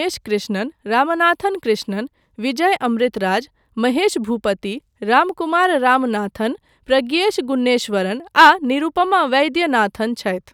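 No technical faults can be heard anywhere in the recording; the signal stays continuous and stable throughout.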